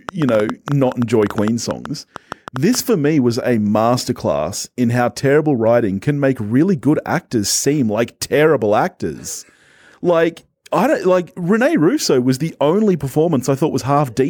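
A speech clip with a train of clicks from 0.09 s to 2.76 s. About twenty similar pops arrive at an uneven pace, near 7.9 per second. They stand roughly 10 dB above the speech. Interference from nearby equipment is the likely cause.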